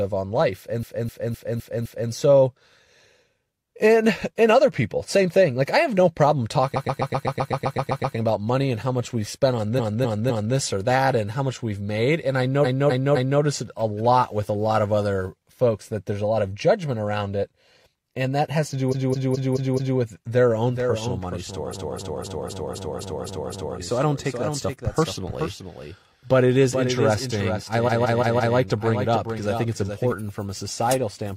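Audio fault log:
0.79–2.07, 6.72–8.13, 9.75–10.52, 12.61–13.38, 18.88–19.95, 21.70–23.74, 27.84–28.52 s: repeated frames. Blocks of 128 to 256 ms replay three to eleven times, giving a stutter and stretching each spot by 0.68 to 2.05 s.
20.69–30.12 s: doubled audio track. A full-band copy about 5 dB quieter trails roughly 0.4 s behind and starts and stops abruptly, likely from a second, slower capture path.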